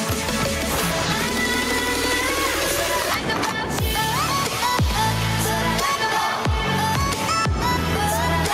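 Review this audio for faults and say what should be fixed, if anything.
No faults can be heard anywhere in this audio. Nothing needs to be fixed.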